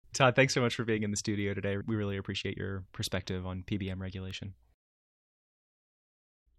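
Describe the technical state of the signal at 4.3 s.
At 4.31 s a bit error spike occurs: one sample carries a flipped bit, so its value jumps by a power of two and immediately returns. It peaks at about -30 dBFS and is heard as a single sharp, broadband tick unrelated to the speech.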